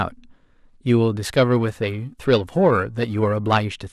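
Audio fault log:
1.23–3.64 s, periodic clock jitter: the converter's clock is wobbling at around 1 kHz, so every part of the speech picks up sidebands spaced about that far above and below it. You hear it as a rough, metallic edge, harshest on the brighter, higher-frequency sounds.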